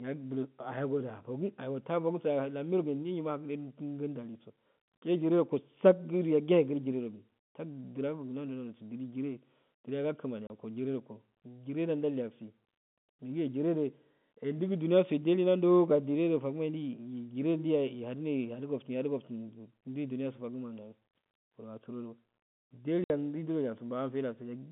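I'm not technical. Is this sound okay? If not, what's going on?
No. Small chunks of the call's data were lost in transit, a fault called packet loss filled with silence, and the receiver played nothing in their place. That leaves sudden gaps in the speech, about 30 ms at 10.47 s and 60 ms at 23.04 s, with hard edges.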